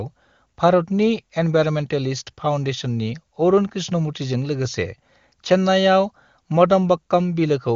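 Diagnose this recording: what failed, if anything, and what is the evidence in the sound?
Nothing stood out on listening: the speech comes across as ordinary AMR wideband (HD Voice) audio, with no content above about 7.3 kHz, and no failure can be heard at any stage.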